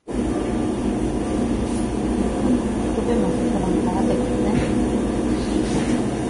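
Vorbis compression damage runs from start to finish, and it is heavy. Nothing is left above about 10.6 kHz, so the top of the sound is simply missing. Below that, the treble detail comes through as a rough, hissy grain, with tones sounding coarse and attacks smeared. This is likely the result of Vorbis encoding at a low bitrate, around 30 kbps judging by the damage, where the upper spectrum is quantised so crudely that fine detail is replaced by noise of similar energy.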